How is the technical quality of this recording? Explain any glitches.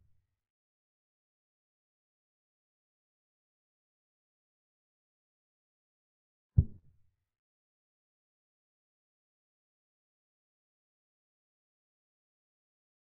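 The recording has one audible glitch: a short concealed packet loss at about 6.79 to 6.85 s. Roughly 40 ms of audio failed to arrive at the decoder in time, and the receiver synthesised about 38 ms to cover the gap by extending the preceding sound before crossfading back into the real signal. The result is a brief smear or wobble.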